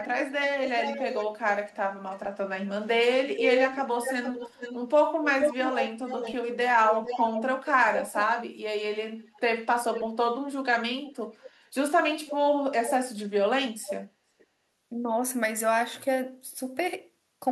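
Echo leak at 0.01–2.3, 3.34–8.24, 9.2–10.07, 11.05–12.91 and 13.83–14.46 s: the speech returns about half a second late (432 ms creeping up to 475 ms), sitting roughly 10 dB below, and louder around 3.34–8.24 s. It's likely a loudspeaker echo canceller on the far end letting its mic pickup through.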